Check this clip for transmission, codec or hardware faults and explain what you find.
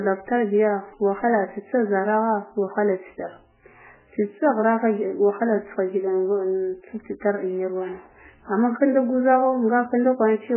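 Heavy MP3 compression runs through the whole speech clip. Nothing comes through above 3 kHz, and the sound is watery and swirly. That's likely an MP3 encoder starved of bits, fitting roughly 8 kbps, cutting the treble and dropping weak frequency lines frame to frame.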